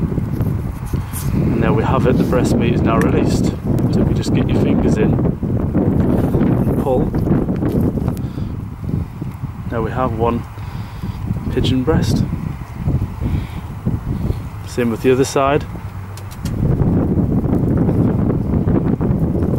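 Single-sample bit error spikes land at 3.79 s, 6.58 s, 8.17 s and 17.55 s. Each is one flipped bit shifting a sample by a power of two, peaking at about -5, -23, -5 and -17 dBFS. Each is heard as one sharp broadband tick unrelated to the surrounding sound.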